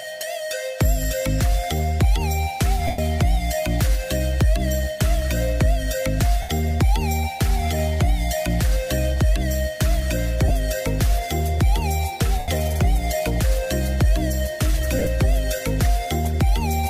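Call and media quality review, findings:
Lost LE Audio frames at 2.87 s (112.5 ms), 6.42 s (75 ms), 10.48 s (22.5 ms), 12.39 s (90 ms), and 14.99 s (scattered over 75 ms, short runs). LC3 concealment repeats the last spectrum with random signs, producing a noisy smear. Longer gaps fade toward silence. Dropouts fit 7.5 ms frames.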